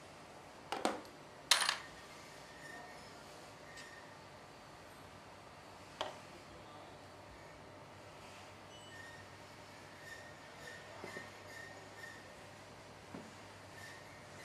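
At 9.55 s and again at 12.80 s, repeated frames make a 186 ms stretch of audio play twice, stuttering; spectrograms show identical adjacent blocks, consistent with two compressed frames resent.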